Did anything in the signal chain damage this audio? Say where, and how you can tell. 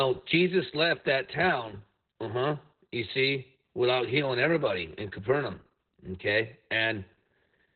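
Yes. Throughout the speech, the sound is muffled, hoarse and slightly robotic, with nothing above 4.4 kHz. That points to the codec stage: Opus voice compression in its SILK narrowband mode, coding the excitation coarsely at a bitrate that fits about 8 kb/s.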